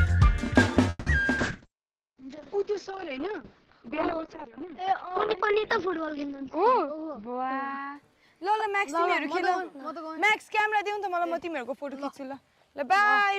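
A call audio freeze runs from 0.89 to 1.08 s: the sound stretches into a fading buzz for about 170 ms, with a brief 10 ms of silence, then resumes where it left off, so nothing is lost. Late packets likely emptied the jitter buffer.

A call bitrate drop begins at 1.4 s and lasts until 9.52 s. The encoder falls from 64 to 7 kbps, staying at its lowest for about 5.2 s, and the bandwidth shrinks from 20 kHz to 6 kHz, leaving the audio coarse, watery and muffled.

A jitter buffer speed-up runs from 6.43 to 7.90 s. To trim excess buffered delay, the receiver cuts short pitch-period slices again and again, roughly 150 ms in total. Playback runs at 111% speed without any pitch change and sounds hurried.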